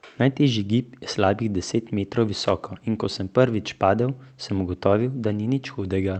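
Right after "je slabih deset metrov", from 2.45 to 2.51 s, a loose connector crackle breaks through: a worn contact briefly making and breaking chops the signal into an irregular scratchy burst. The waveform shows jagged spikes and gaps, and the spectrogram shows broadband vertical streaks reaching the call codec's 8 kHz ceiling.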